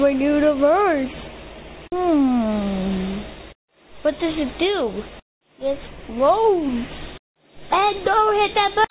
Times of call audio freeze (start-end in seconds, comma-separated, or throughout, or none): none